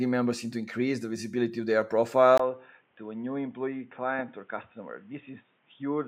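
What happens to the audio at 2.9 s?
At 2.9 s you're inside a stretch, 2.38 s to the end, where the input seems switched to a poorer device. After "the visibility of their" comes a 20 ms gap, then nothing above 3.7 kHz, a level about 5 dB lower and a new, faint noise floor.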